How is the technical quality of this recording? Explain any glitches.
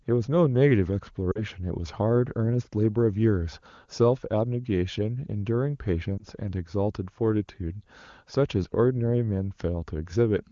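Two short dropouts of lost AMR speech frames break up the speech, one from 1.32 to 1.44 s and a shorter one around 6.18 to 6.22 s. Each time, radio errors corrupted a frame's checksum, so the decoder guessed, replaying the last good pitch and vocal-tract settings at falling gain. At the single lost frame you hear a brief dip or warble, and over the two-frame run the voice drops to near silence. The first gap, about 40 ms, fits two frames. The second, about 20 ms, fits one. The AMR wideband (HD Voice) codec itself sounds clean, consistent with a high bitrate.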